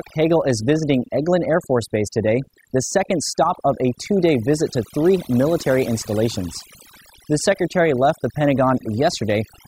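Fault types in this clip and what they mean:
overdone noise removal: A noise reduction stage applied far too strongly across the whole speech clip, pulling individual frequency bands down or off whenever they sit close to its noise estimate. Between phrases the background drops to near silence dotted with twinkling, chirpy specks, and the quieter parts of the voice are stripped away with the noise. Unlike plain muffling or a low-pass filter, the loss flickers band by band rather than cutting off evenly.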